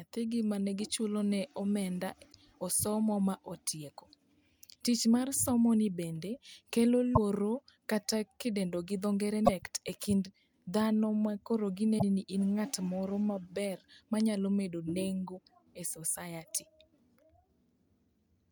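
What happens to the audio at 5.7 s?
Nothing goes wrong at 5.7 s; the speech carries straight through that point with no dropout, click, distortion or other audible fault.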